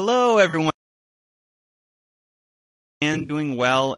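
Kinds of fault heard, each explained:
Low-delay AAC compression: The whole clip sounds rough and grainy, with a hiss-like fill between the harmonics of the speech and a thin, somewhat synthetic top band, and the damage is plainly audible. This likely comes from AAC-ELD, the low-delay AAC used for video calls. Its short frames resolve pitch harmonics poorly and need more bits, and the degree of roughness fits a bitrate around 32 kbps, too low to hide that weakness.
AAC frame loss with concealment: Brief smeared, noisy patches interrupt the speech at 0.49–0.55 s and again at 3.13–3.31 s. The decoder never received some compressed frames, so it filled each gap by reusing the last good spectrum with altered phase or interpolated energy. The first patch covers about 40 ms. The second scatters about 100 ms of missing audio over 160 ms, with no single run much beyond 40 ms.
Audio dropout to silence: From 0.70 s to 3.02 s the speech cuts out completely, leaving about 2.3 s of dead digital silence with no room tone underneath, and it resumes abruptly mid-flow. 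The likely cause is that the input signal was lost, through a disconnected device, a broken link or an accidental mute, while the recorder kept writing silence. Whatever was spoken during that stretch is simply gone.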